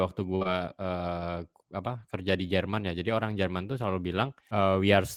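A speech recording with a burst of packet loss from 0.35 to 0.43 s: about 60 ms of audio never arrived, and the receiver stretched the preceding sound across a 53 ms gap, turning it down as it went. On a spectrogram this shows as a smeared stretch, and in the waveform as a decaying envelope. Immediately after, from 0.43 to 0.47 s, a short concealed packet loss adds another 20 ms of synthesized fill, blended back into real audio, heard as a brief smear and visible as a blurred seam.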